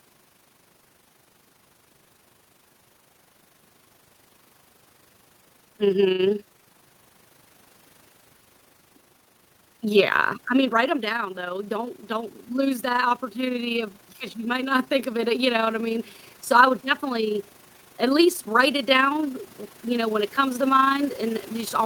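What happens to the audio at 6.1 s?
At 6.11 s a short stall from a late packet begins and runs to 6.21 s. The jitter buffer ran dry while waiting for the next packet, so the receiver stretched the last sound for about 75 ms and then resumed from exactly where it left off. Nothing is lost, but everything after it now plays 75 ms later. It sounds like a sound held unnaturally long, with a slight buzz or dip. On a spectrogram the harmonics run flat and unchanging across that span. The waveform shows near-identical cycles repeated.

The overlap-add ripple present throughout the clip also runs through this moment. Frames were recombined with an overlap that doesn't sum to constant gain, so the level swings by about 6 dB roughly 30 times a second. That gives a fast flutter. The waveform envelope shows regular scalloping at the frame rate, and a spectrogram shows evenly spaced vertical banding.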